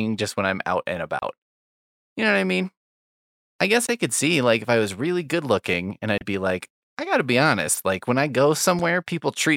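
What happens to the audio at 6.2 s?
Right after "really good looking and", from 6.18 to 6.22 s, damaged data in the compressed stream breaks the audio. The decoder misreads the corrupted frames and loses sync. It produces a brief glitch before "be like I gotta".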